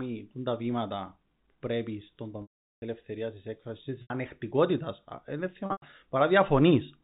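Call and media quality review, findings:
Packet loss with pitch repetition, 2.42–2.82 s. About 400 ms missing. Last pitch period repeated, fading over about 50 ms into silence, then cross-fade back. Gap fits 20 ms packets. 4.02–4.10 s: 80 ms gap bridged by the repeated period. Sounds like a held, buzzy note. 5.66–5.82 s: 140 ms lost, scattered over 160 ms. Longest run 100 ms, long enough to fade to silence. Band stops at 4 kHz, which points to G.711 A-law at 64 kbps.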